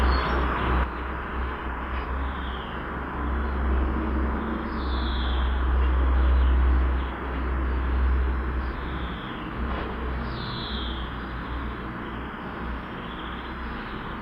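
At 0.84 s the sound abruptly drops by about 6 dB and stays down to the end, likely one channel dropping out before the mono sum.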